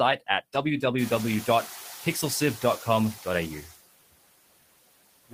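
Noise suppressor artifacts run through the whole speech clip. The suppressor estimates the steady background in each frequency band, frame by frame, and pulls those bands down by about 20 dB, so the noise floor is held well under the speech.

Noise suppressor catching up, from 0.98 to 1.87 s: the room noise jumps by about 22 dB at around 1 s, to about 17 dB below the speech. The suppressor's noise estimate lags behind that jump, cutting it by only about 4 dB at first. The louder background then sinks over roughly 890 ms as the estimate adapts.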